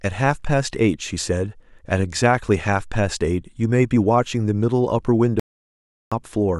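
At 5.40 s the speech cuts out mid-flow into dead digital silence, with no room tone at all, until it resumes at 6.12 s. That's an audio dropout to silence, about 0.72 s gone, likely the input briefly lost while the recorder kept writing zeros.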